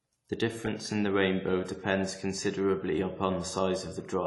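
The speech was likely squeezed through a low-bitrate AAC compression stage, with the AAC-LC encoder starved of bits in a way that fits about 32 kbps. To save data it discarded everything above 11.4 kHz and coarsely quantised what remained. Throughout the clip the sound is dull and lacks air, and sibilants and held sounds carry a fizzy, warbling smear that is plainly audible.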